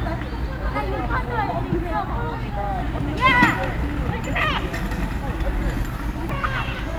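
A brief chirp or blip is heard at 0.00 s and again at 6.30 s. Both come from damaged data in a compressed stream: corrupted bytes made the decoder misread those frames and lose sync until it found the next valid frame header.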